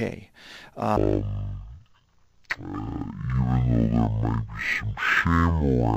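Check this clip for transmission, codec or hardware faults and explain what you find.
One fault is present. From 0.97 s to the end, stereo read as mono: interleaved left and right samples are consumed as one channel, so the audio plays at half speed and an octave low.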